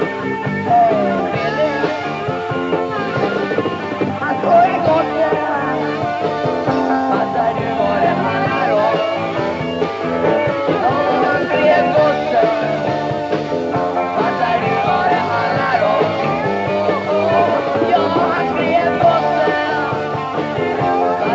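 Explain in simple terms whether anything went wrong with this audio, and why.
Nothing went wrong with this audio. It has passed through a call's microphone processing, which trims away the deepest bass and leaves nothing above about 8 kHz, and that is normal behaviour, not a fault.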